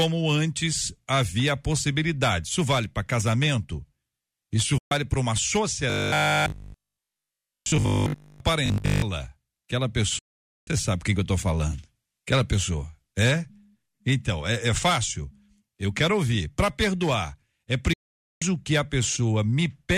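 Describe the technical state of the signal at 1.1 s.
At 1.1 s the speech signal is intact, with no audible dropout, distortion, noise burst or other technical fault at that moment.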